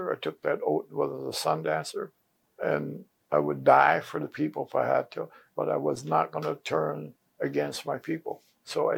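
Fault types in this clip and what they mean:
No faults of any kind can be heard in this clip.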